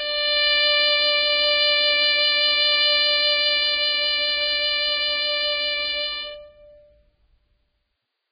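From start to finish, the music sits under heavy codec damage. Nothing reaches above 5 kHz, so the top end is simply gone. What treble remains turns to hiss and grain. Sustained tones sound rough, and attacks are smeared rather than crisp. The likely cause is Vorbis compression at a very low setting, which fits a bitrate near 14 kbps. The coder lowered its cut-off and quantised the upper residue so coarsely that detail became noise.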